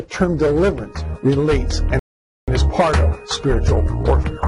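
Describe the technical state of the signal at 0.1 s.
At 0.1 s the signal is intact, with no audible fault at that moment.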